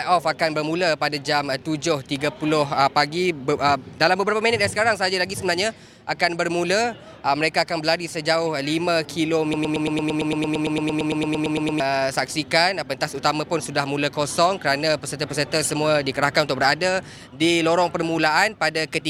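A broken-record loop runs from 9.54 s to 11.8 s. A fragment of about 113 ms repeats exactly, back to back, 20 times. The audio due in that span never plays. The likely cause is a stalled player, encoder or stream resending its last fragment.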